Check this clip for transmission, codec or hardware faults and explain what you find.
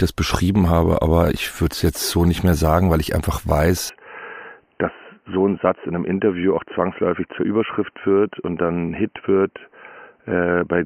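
One fault is present. From 3.89 s to the end, the input likely switched to a poorer device. The new device passes a narrower band, with nothing above 3 kHz, so the speech turns dull and boxy. It drops about 5 dB. Faint new background noise appears. There is no gap at the switch.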